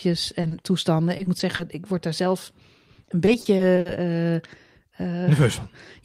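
Right at the start, around 0.41, 0.47 and 0.61 s, there's short concealed packet loss: 20 to 40 ms holes patched by stretching the last sound, heard as quick smears. Then repeated packet loss gives choppy, robotic stretches from 1.17 to 1.61 s and 2.93 to 3.87 s, with holes up to 60 ms patched one after another.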